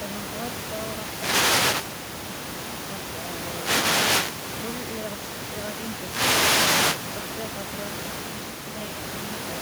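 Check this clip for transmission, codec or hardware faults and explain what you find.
One fault is audible, and it runs to the end of the clip. At 7.90 s the speech turns suddenly roomy and hollow, with thinner bass. The level drops by roughly 5 dB. More background noise is heard relative to the speech, though it stays well below it. This is likely a switch to a distant microphone. The close microphone's feed seems to have dropped out, leaving a mic further away that picks up more room reflection and less low end. The speech never returns to the close sound.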